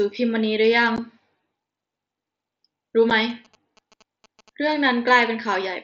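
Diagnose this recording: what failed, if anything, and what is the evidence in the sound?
Unconcealed Bluetooth headset packet loss, network stage (the headset radio link). The speech has two abrupt holes, at 0.96 s and 3.10 s, about 15 ms and 7.5 ms long, each with hard edges. The link carries the audio as mSBC, whose light grain stays in the background, in fixed-length packets. When packets are dropped, nothing fills the gap, so silence replaces the speech. The gap lengths fit two lost packets and then one.

GSM signalling bursts, analogue wiring stage. From 3.3 s to 4.88 s a galloping dit-dit-dit of short buzzes sits about 30 dB below the speech. The buzz repeats at 217 Hz, the GSM frame rate. A nearby 2G phone is exchanging signalling with its network in short radio bursts. An unshielded trace or amplifier input picks up that RF and rectifies it, which turns the burst envelope into audible pulses.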